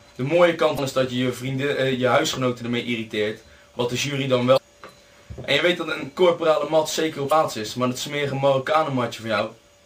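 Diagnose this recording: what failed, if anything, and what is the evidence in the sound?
The fault sits at the codec stage: damaged data in a compressed stream. Four short disruptions occur at 0.75–0.79 s, 4.54–4.58 s, 7.28–7.32 s and 9.37–9.40 s, each around 45 ms except the last at about 25 ms. Corrupted bytes made the decoder misread frames and lose sync until it locked onto a valid header again. Unlike a buffer dropout, these spans come from the decoder losing its place in the compressed data rather than from audio arriving late.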